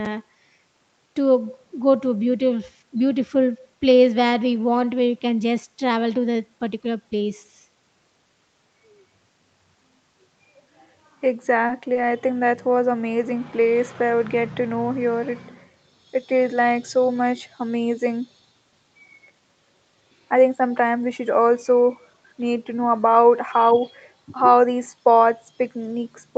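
At 11.67 to 11.72 s and again at 11.93 to 11.98 s, a short stall from a late packet holds the speech for about 20 ms, then resumes exactly where it paused. Unlike packet loss, nothing is skipped.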